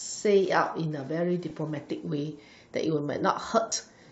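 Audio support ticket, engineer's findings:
Breathy, grainy edge on the speech for the whole clip, upper band noisy rather than cleanly cut. Likely Bluetooth LC3 compression around 48 kbps, 10 ms frames: noise-filled highs, unlike a plain low-pass.

Lost LE Audio frames at 1.50 s (one 10 ms frame) and 3.70–3.72 s (about two frames). Short noisy smear, not a click or hard dropout, from LC3 concealment reusing the last spectrum with random signs.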